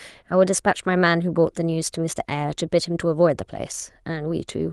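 No technical faults are audible.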